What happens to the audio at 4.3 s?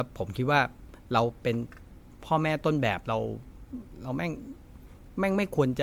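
At 4.3 s the speech sounds swirly and hollow, with a smeared, watery texture and softened consonant attacks. The same quality runs through the whole clip rather than starting at that moment. The cause is likely generation loss: the audio was encoded and decoded with MP3 around four times, at a rate that sounds like about 96 kbit/s. Each pass requantised on a shifted frame grid, piling up noise and spectral holes even though content still reaches 20.1 kHz.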